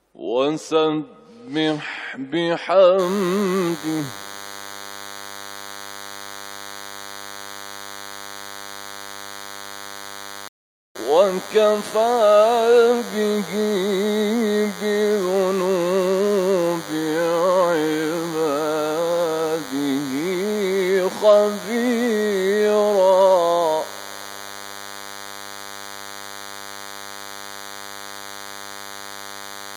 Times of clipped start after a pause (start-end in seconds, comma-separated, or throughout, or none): none